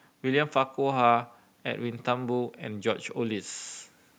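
No audible technical faults anywhere in the speech recording.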